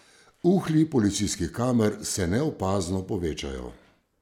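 Nothing in the speech stood out as a technical fault on listening.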